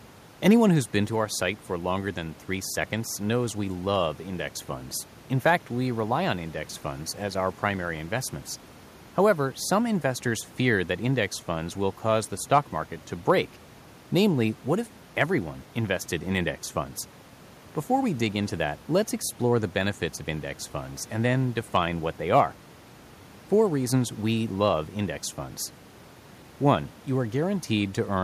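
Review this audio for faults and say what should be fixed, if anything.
No faults; nothing to fix.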